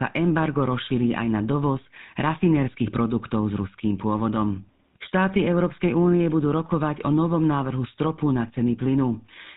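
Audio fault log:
Throughout, GSM full-rate codec: the speech has the buzzy, gravelly roughness of the original GSM mobile codec, and the damage is plainly audible. The codec models the vocal tract and excites it with regularly spaced pulses. It keeps only one excitation sample in three. That coarse, pulse-driven excitation gives the grainy buzz. Nothing above 4 kHz gets through, so the sound is dull and narrow. The rate heard fits about 13 kbps.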